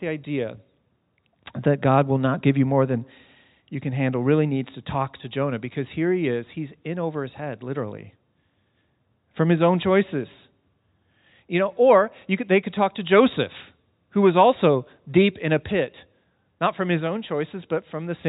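No technical faults detected.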